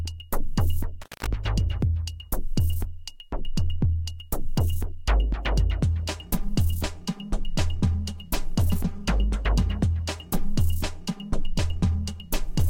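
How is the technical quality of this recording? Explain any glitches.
One glitch stands out, an intermittent contact between about 1.02 and 1.27 s. The sound drops out abruptly, with a short crackle as it goes and again as it returns. For roughly 0.18 s in the middle only a faint hiss remains. This is what a loose cable or plug does: the connection briefly opens and cuts the signal path, and the scraping of the contact as it breaks and remakes produces the crackle.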